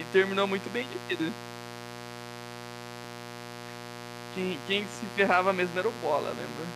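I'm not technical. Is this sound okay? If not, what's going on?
No. A steady, raspy mains buzz runs under the speech from start to finish. It comes from the 60 Hz electrical supply leaking into the recording, often through a dimmer or poor shielding. It is fairly loud, not far below the voice.

At 4.95 s there is a small jump in the sound. This is likely a dropped buffer (overrun). The computer missed a tiny sliver of audio, and the two sides were joined with no gap.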